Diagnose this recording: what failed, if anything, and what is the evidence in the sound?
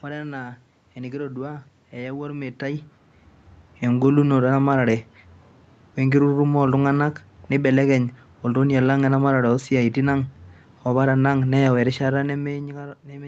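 Nothing failed: the speech passes through the call processing, the Opus path and its jitter buffer without a fault, with the band topping out around 8 kHz as that path does, the room's background noise sitting underneath, and level shifts near 2.5 s and again near 12 s that sound like the talker moving relative to the microphone rather than anything in the chain.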